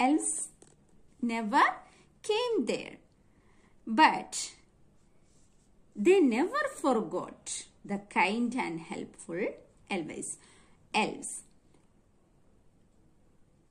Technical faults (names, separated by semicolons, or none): none